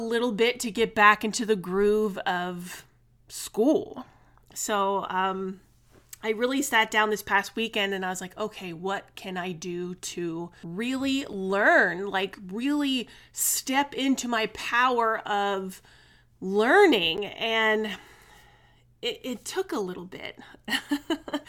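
Twice, the audio cut out, leaving a block of digital silence in the speech: at 11.33 s, just after "I do to really", a 5.3 ms gap that fits a 256-sample buffer, and at 17.17 s a 10.7 ms gap. The hard cut and return are too brief to register as silence, so each is heard as a tick or dip.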